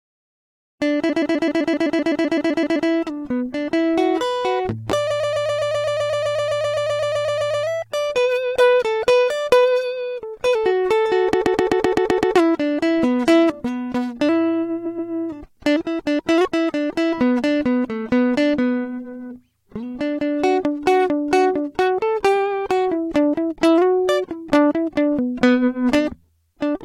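A music clip, entering on a clean fade-in, with four stretches of repeated frames: 1.09–2.88 s, 5.10–7.66 s, 11.33–12.35 s and 14.85–15.10 s. In each, a 128 ms block of compressed audio plays again and again (14, 20, 8 and 2 extra times), stuttering and adding up to about 5.6 s. The waveform shows identical tiles side by side, and the spectrogram shows the same pattern copied along the time axis.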